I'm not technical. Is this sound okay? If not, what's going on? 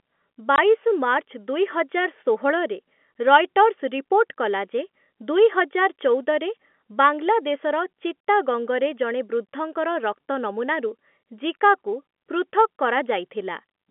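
No. At 0.56 to 0.58 seconds the speech drops out for a moment, leaving a short hole of silence about 20 milliseconds long. This is packet loss filled with silence: the audio travels in small chunks, one chunk went missing, and the receiver played nothing in its place. The gap is the length of a single chunk. The narrow telephone-like tone comes from the line's normal G.711 telephone coding.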